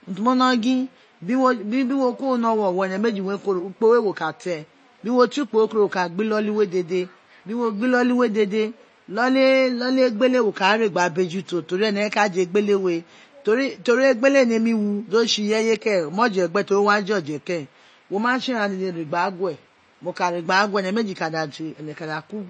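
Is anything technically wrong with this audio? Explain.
Yes. Throughout, the speech sounds watery and swirly, with nothing above about 8.3 kHz, likely from MP3 compression at a low bitrate near 32 kbps, cutting treble and flickering weak frequencies.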